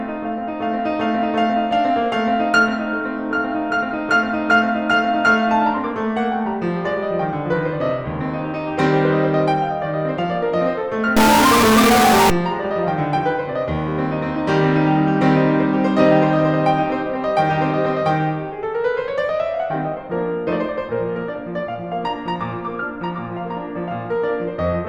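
Music clip with a stuck-bit fault from 11.17 to 12.30 s: harsh, buzzy distortion, with steps of about -10 dBFS, likely from a high-order converter bit held fixed.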